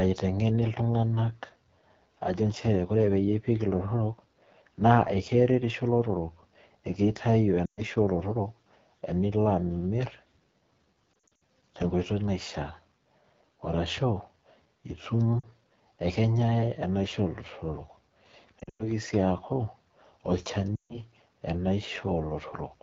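Throughout the recording, the speech carries the rough, raspy texture of the AMR wideband (HD Voice) codec running at one of its lowest modes, which fits 8.85 kbit/s. At that rate the pulse model cannot shape the voice cleanly, so harmonics look smeared and grainy on a spectrogram. Energy stops sharply near 6.4 kHz, and above it a thin, uniform band of noise fills in up to 7 kHz.

Lost AMR speech frames then break the audio five times. The decoder could not use those frames, so it repeated the last good pitch and vocal tract settings while lowering the gain. Each gap sounds like a smeared, fading stretch, sometimes close to a dropout, and the voice returns weak and rough. The first, at 7.65 s, lasts 120 ms. At 11.22 s the losses are scattered over about 0.28 s, and the longest gap is 60 ms, so the sound stutters. A short 40 ms warble comes at 15.40 s. At 18.59 s the damage spreads over about 0.2 s and includes a 100 ms run. 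The last, at 20.76 s, lasts 140 ms. On a waveform each shows as an amplitude sag. A spectrogram shows frozen, blurred harmonics that fade within a few tens of milliseconds.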